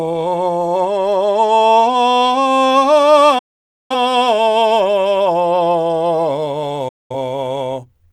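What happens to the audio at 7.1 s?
At 7.1 s the music is inside a digital broadcast dropout that runs from about 6.88 s to 7.15 s. The receiver stopped getting usable frames, so it muted: the sound fades out in about 8 ms, leaves roughly 213 ms of silence, then resumes further along. That length fits about five lost frames. Unlike a brief click or a stutter that repeats audio, this is a clean muted hole, and whatever was broadcast during it never comes back.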